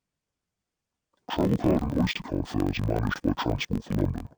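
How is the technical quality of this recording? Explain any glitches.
The recording is impaired throughout by a single format fault. Interleaved audio read as planar runs for the whole clip. Each block of about 21.3 ms, which fits a 1024-sample block, stores left and right samples alternately, but playback takes the first half as left and the second half as right. Each half stretches across the full block at half speed, so the speech drops an octave, sounds doubled, and chops at the block rate near 47 Hz from the block edges.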